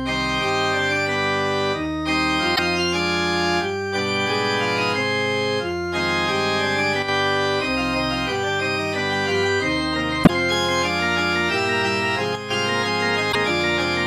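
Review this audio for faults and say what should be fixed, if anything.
Damaged data in a compressed stream causes three short glitches, each about 70 ms long, at 2.52–2.59 s, 10.23–10.30 s and 13.29–13.36 s. Corrupted bytes make the decoder misread those frames, lose sync and hunt for the next valid header, so the sound briefly turns to garbage before recovering. Verifying stream integrity with checksums and retransmitting or concealing bad frames would prevent this.

One channel drops out twice, from 7.02 to 7.08 s (60 ms) and from 12.35 to 12.50 s (150 ms). Each time the level falls abruptly by about 6 dB, which likely means one stereo channel went silent and the mono sum kept only the remaining half of the shared content. On the waveform this shows as a sudden step down in amplitude with straight edges, and the spectrogram shows a uniform darkening across all frequencies for the same span. 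Checking cable and connector continuity, along with the channel routing and buffer handling on both sides, would prevent these gaps.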